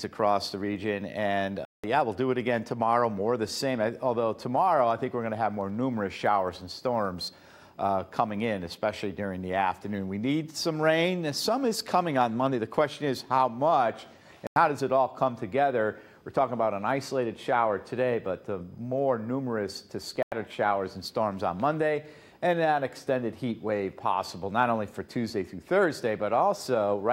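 Corrupt frame muted at 1.65 to 1.99 s, 14.47 to 14.56 s and 20.16 to 20.32 s: damaged compressed frames were rejected by the decoder and replaced with silence, so each hole cuts in abruptly while timing stays intact. The gaps' lengths suggest a few frames were lost each time.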